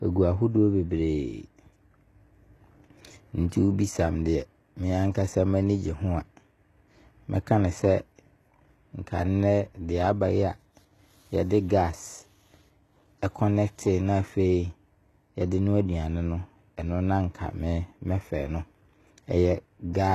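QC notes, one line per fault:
Throughout, HE-AAC compression: the sound is plainly damaged by coding, with nothing above 12.3 kHz and a treble that sounds synthetic, with gritty, metallic or lispy s sounds. The likely cause is a low-bitrate codec, consistent with roughly 16 kbps, that codes only the lower spectrum and rebuilds the top by copying lower bands upward under a coarse envelope, so harmonics fail to line up across the crossover.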